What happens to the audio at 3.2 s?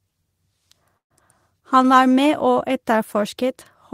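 Nothing goes wrong at 3.2 s; the speech plays through that moment intact.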